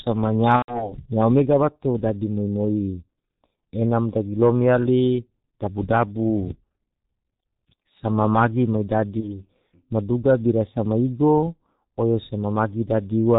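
From the start, the speech carries heavy G.723.1 codec damage: muffled, hoarse, with smeared consonants. The slow-updating low-rate model fits its 6.3 kbit/s mode. A spectrogram shows nothing above 4 kHz and blocky, 30 ms-stepped formant bands.

VoIP packet loss concealed by the speech codec appears from 0.56 to 0.94 s. The decoder fills a gap that points to about 120 ms of missing audio, roughly four frames, by repeating its last pitch and filter. The result fades and is muted from the third lost frame. The waveform shows the fill shrinking frame by frame. Quality stays degraded briefly afterward. A shorter loss, about 30 ms, occurs from 9.20 to 9.43 s, with a brief fill and a weakened recovery.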